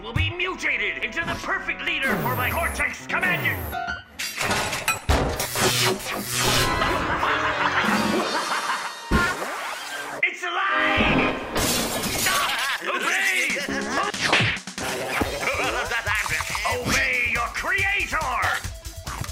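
Dropped samples produce single clicks at 1.03, 1.88, 6.74, 8.83 and 13.98 seconds. At each one, the sound is heard as a sharp, isolated tick, and a spectrogram would show a thin vertical line across all frequencies. The likely cause is a brief gap where roughly 0.7 ms of audio went missing, so the waveform jumps abruptly from one value to a later one. The loss is far too short to remove anything audible; only the discontinuity itself is heard.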